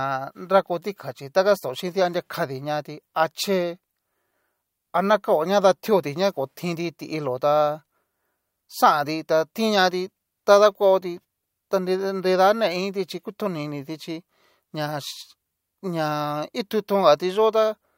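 Speech, with no audible faults.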